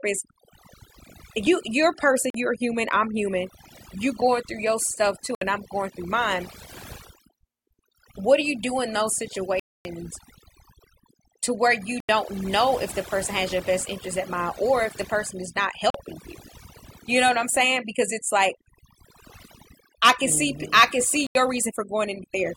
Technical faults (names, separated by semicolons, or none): overdone noise removal; Bluetooth dropout